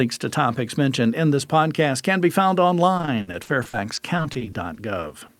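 From 2.97 to 5.31 s, after "podcast can be found", repeated packet loss strikes twenty times. Gaps up to 60 ms get patched, sounding choppy and robotic.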